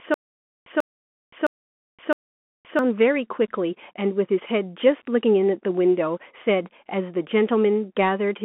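Stutter with silent gaps, from the start to 2.79 s: already under way as the clip opens, a 141 ms burst of speech repeats four times, each followed by about 521 ms of digital silence, on an even 662 ms cycle. This is likely a stalled player or stream replaying its last fragment at each retry and then running dry, so the speech that belonged in those gaps is lost.

Bluetooth CVSD headset codec, throughout: the speech sits in a narrow 200 Hz to 3.4 kHz telephone band with nothing above 3.8 kHz. The damage is plainly audible: loud high content distorts, s sounds turn scratchy, and a granular hiss lies underneath. This fits one-bit delta modulation at around 64 kbps, whose adaptive step cannot keep pace with fast waveform changes.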